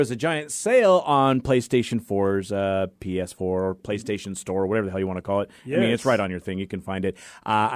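Nothing goes wrong anywhere in this recording; the speech just runs along without a single glitch, dropout or hiccup to point at.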